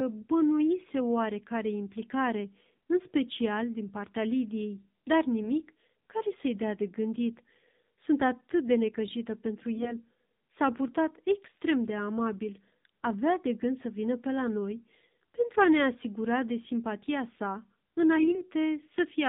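AMR narrowband mobile codec, throughout: the speech has been through AMR-NB coding, so nothing above 4 kHz survives. The voice is rebuilt from a vocal-tract model fed by a handful of pulses per sub-frame, which makes it noticeably buzzy and synthetic. That plainly audible coarseness fits one of the lower modes, around 7.4 kbps, where too few bits reach the pulses and spectral detail.

AMR bit errors, at 5.39 to 5.51 s, at 9.75 to 9.94 s just after "atât de necăjită pentru", and at 18.16 to 18.42 s just after "asigura de simpatia sa": the weakly protected bits in a short run of frames arrived corrupted, a few percent of them, with the heaviest damage in the middle burst. The core bits still passed their checksum, so the frames were decoded anyway. The excitation pulses landed in the wrong places and the fine pitch, gain and spectral values drifted. In each burst the pitch and level roughly hold, but the voice turns hoarse, scratchy and gargly. 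The last burst lasts longest, which points to about ten 20 ms frames being hit.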